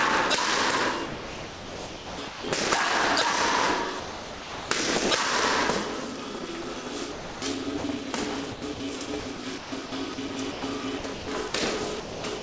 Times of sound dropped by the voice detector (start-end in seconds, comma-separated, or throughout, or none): 4.00-4.70